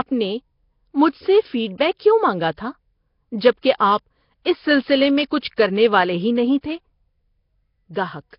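Nellymoser compression runs throughout. The speech has a rough, hissy halo and a smeared, underwater character, with nothing above 5.3 kHz. This likely comes from the Nellymoser Asao codec at a low bitrate near 22 kbps, filling starved bands with noise.

Pre-echo appears at 1.78 to 1.80 s, 3.78 to 3.80 s and 5.39 to 5.43 s. A brief hiss of 22, 26 and 33 ms runs ahead of each sharp onset because block-wide quantisation noise leaks before the attack, which sounds softened and smeared.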